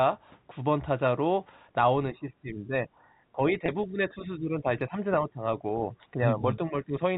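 Telephone speech, most likely with the echo canceller clamping down during double talk: in three stretches, 2.11 to 2.88 s, 3.32 to 5.41 s and 6.13 to 6.93 s, the talker's level sinks by up to about 15 dB (about 10 dB in the later two), so this is speech suppressed in double talk. Inside the middle stretch, at 3.66 to 3.68 s, about 20 ms of audio went missing, which points to two lost packets. The receiver filled the gap with packet loss concealment by pitch repetition, giving a brief held, buzzy note over the G.711 telephone band.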